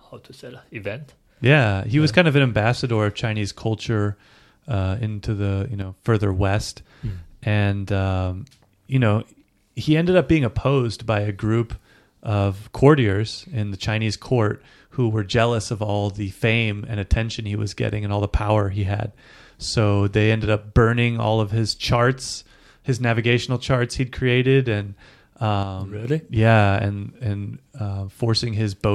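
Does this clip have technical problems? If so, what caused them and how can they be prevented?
Yes. The speech twice drops abruptly by about 6 dB: from 5.82 to 6.06 s, between "uh into the you" and "west mm and um", and from 25.63 to 26.05 s. This is likely one channel dropping out, so only the surviving side reaches the mono sum. A fade or gain ride would ramp, but here the level steps down and back instantly by exactly half. Secure stereo cabling and connectors, and monitor both channels while recording.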